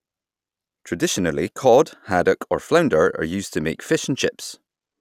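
No technical faults can be heard anywhere in the recording.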